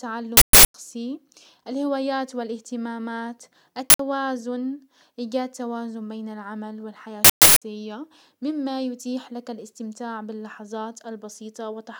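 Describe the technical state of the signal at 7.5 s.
An uninitialised buffer was played from 7.25 to 7.62 s before audio reached it, turning leftover memory into a loud burst of digital noise.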